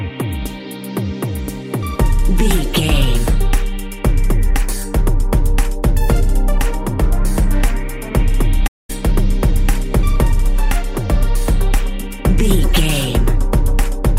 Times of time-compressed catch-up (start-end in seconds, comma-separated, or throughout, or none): none